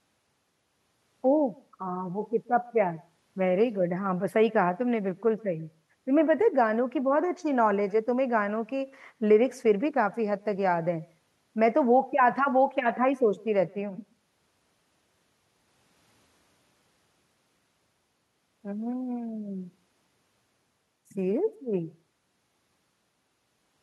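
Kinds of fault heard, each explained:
Echo with no canceller: Throughout the speech, each phrase is trailed by a faint, thin copy of itself arriving around 150 ms later and sitting about 28 dB below the direct sound, so it reads as a ghostly shadow rather than a distinct repeat. This happens when the far end plays the call through a loudspeaker, its microphone picks that playback up, and nothing removes it before it travels back across the network.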